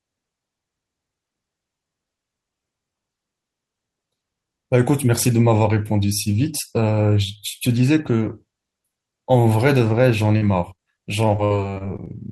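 At 10.37 to 10.43 s and 10.75 to 10.81 s, short concealed packet loss occurs. Missing audio is patched by extending the last sound, heard as brief smears. From 11.37 to 12.08 s, repeated packet loss leaves seven gaps, the longest 58 ms. Each is patched in turn, giving choppy, robotic speech with pieces missing.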